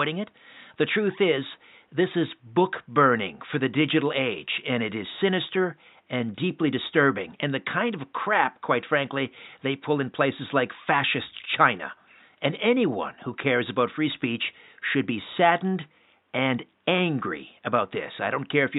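Nothing here points to a technical fault, and the only thing in the background is the ordinary room noise around the microphone, sitting about 46 dB below the speech.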